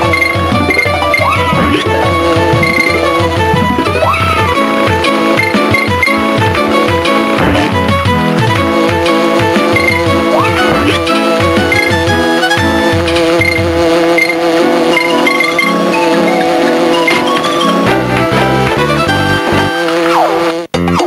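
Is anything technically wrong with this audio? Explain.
Yes. Gain pumping runs throughout: the gain ducks around 10 dB under loud sounds, likely from excessive gain feeding a fast limiter.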